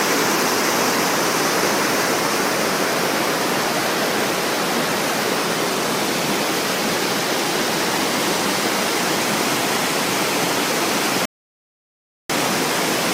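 At 11.25 s the player exhausts its store of downloaded audio and has to halt until more data arrives, a rebuffering stall. The sound drops abruptly into silence and stays there until 12.30 s, then picks up at exactly the point where it broke off. No material goes missing; instead the gap inserts roughly 1.04 s of dead air, stretching the playback timeline by that amount.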